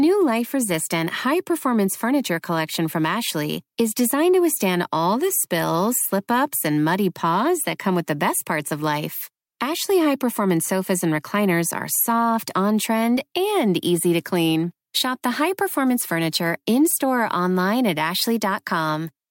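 It's a speech clip with clock slip clicks running nearly the whole way through, from about 0.38 s to 18.97 s. You get faint, evenly spaced ticks roughly every 0.4 s, around fifty in total, and they stand out most when the speech is loud and sustained. The likely cause is two devices running on unsynchronised clocks, off by something like 50 ppm, so a single sample gets dropped or doubled each time the drift adds up to a whole one.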